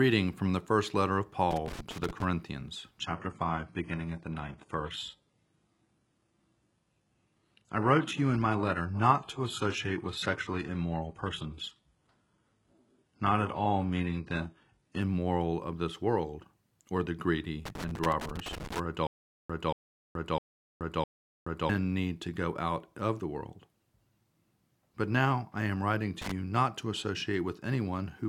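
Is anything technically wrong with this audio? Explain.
Yes. The speech has three kinds of technical fault.

Loose connector crackle appears at 1.51 to 2.24 s, 17.65 to 18.80 s, and briefly at 26.22 to 26.32 s. A worn or dirty contact is making and breaking as it shifts. Each break chops the signal, and any DC offset on the line turns the jumps into pops. The result is an irregular scratchy crackle laid over the speech, lasting under a second in the first and last cases and just over a second in the middle one.

From 2.99 to 14.99 s the adaptive stream is at a lower bitrate. The player switched to a cheaper version of the stream when the connection slowed. The quality drops suddenly, with no gap. Nothing remains above 11.5 kHz, so the treble is dulled, and codec artefacts rise. That points to a fall from about 96 kbit/s AAC to roughly 12 kbit/s HE-AAC. Full quality returns abruptly at 14.99 s.

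A stutter with silent gaps runs from 19.07 to 21.69 s. A burst of 230 ms repeats four times. Each repeat is followed by 427 ms of digital silence, so the pattern cycles every 656 ms. The likely cause is a player or stream stall: each retry replayed the last fragment, then the buffer ran dry. The audio that belonged in that stretch is missing.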